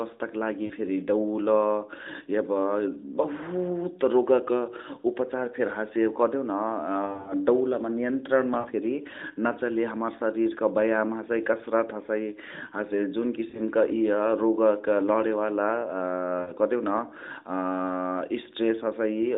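Lost AMR speech frames show up as short smeared dips at 0.66, 7.06 to 7.35, 8.6 (right before "फेरी नाचले"), 13.5 and 16.42 s. The decoder stretches the last good sound with fading gain, and the 7.06 s patch comes as a scattered cluster.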